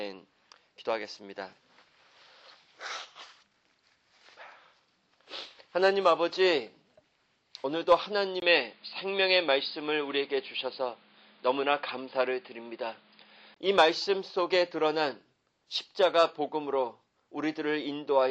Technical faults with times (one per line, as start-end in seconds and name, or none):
8.40-13.56 input switched to a poorer device